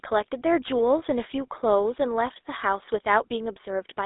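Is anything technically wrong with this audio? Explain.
Yes. Throughout the speech, the GSM full-rate codec is audible: the line band runs from 300 Hz to 3.7 kHz, and a vocal-tract model driven by regular pulses, keeping only a third of the excitation, produces a plainly buzzy, gravelly roughness that fits 13 kbps coding.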